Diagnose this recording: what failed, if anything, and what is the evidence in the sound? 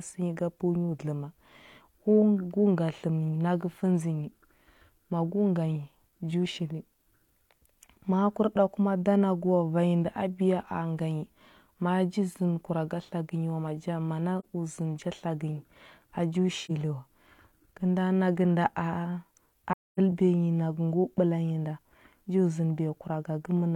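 Codec stage: AAC frame loss with muting. The decoder zeroes the lost frames, leaving faded holes at 14.39 s, 16.65 s and 19.72–19.99 s, unlike a buffer dropout's hard edges.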